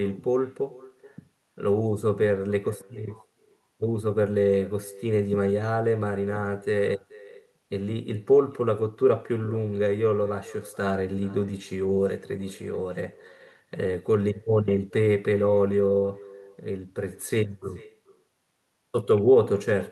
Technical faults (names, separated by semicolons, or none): echo with no canceller